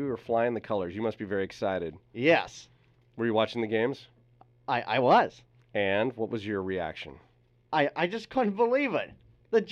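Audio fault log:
No faults were found in this speech clip. Nothing in it calls for a timed entry in this log.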